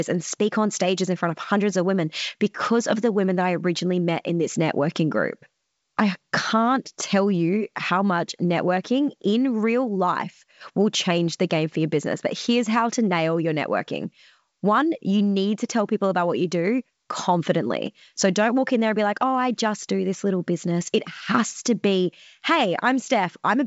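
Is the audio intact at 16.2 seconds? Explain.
Yes, at 16.2 seconds the audio is intact, with nothing there beyond the usual G.722 wideband telephone coding, which keeps the sound clear but leaves nothing above about 7.7 kHz.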